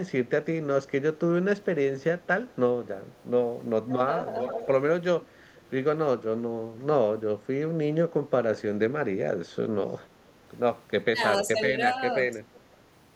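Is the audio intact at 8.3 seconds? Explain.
Yes, at 8.3 seconds the speech carries on cleanly, with no dropout, click, glitch or other fault to be heard at that moment.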